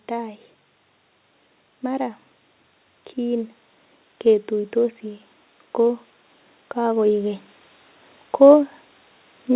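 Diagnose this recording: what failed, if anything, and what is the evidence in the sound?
At the call-processing stage, automatic gain rising sets in: the gain control judged the incoming speech too quiet and pushed its gain up step by step between 6.75 and 7.47 s, by about 3 dB in total. Because the whole input is scaled, the voice and the background noise swell together over that stretch rather than the voice alone getting louder. The call codec's band limit, with nothing above 4 kHz, stays the same across the rise.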